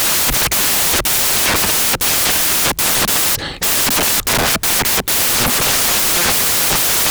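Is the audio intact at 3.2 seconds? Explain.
No, at 3.2 seconds the speech is covered by loud, harsh broadband noise, and that holds for the whole clip, not just this moment. The fault is samples built from the wrong bytes: each sample's bytes are assembled in the wrong order or alignment, so the rapidly fluctuating low-order bits end up as the dominant part of every value. The result is loud, harsh broadband noise.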